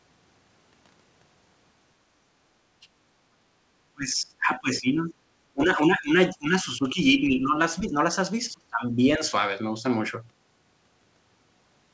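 Between 3.94 and 9.23 s the speech dips and breaks up in five stretches, at 3.94–5.12, 5.53–7.57, 7.79–7.94, 8.53–9.0 and 9.17–9.23 s, the deepest falling roughly 25 to 30 dB. This is likely speech suppressed in double talk, with the echo canceller turning down this side's talker along with the loudspeaker echo.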